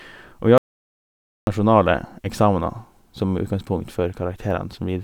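At 0.58 s the speech cuts off abruptly into dead digital silence, with no room tone, until it resumes mid-flow at 1.47 s. This audio dropout to silence, lasting about 0.89 s, likely comes from a lost input while the recorder kept writing silence.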